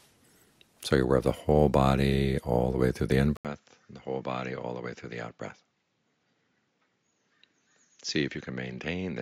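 Input switched to a poorer device, at 3.37 s: after an 80 ms silence the sound turns duller until the end, with nothing above 7.3 kHz, roughly 10 dB quieter, over a faint new noise floor. A likely change of microphone or headset causes this.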